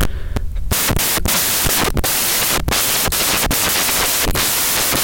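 From start to finish the speech is buried under samples built from the wrong bytes: each value is assembled misaligned or byte-swapped, so the rapidly varying low bits dominate. It sounds like loud white noise. The spectrogram shows flat broadband energy, and the waveform is dense hash.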